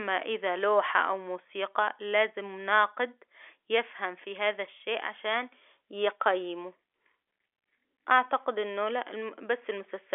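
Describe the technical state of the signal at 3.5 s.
At 3.5 s the audio is intact, carried through ordinary G.711 telephone coding that confines it to the 300 Hz to 3.4 kHz line band with nothing above 3.7 kHz.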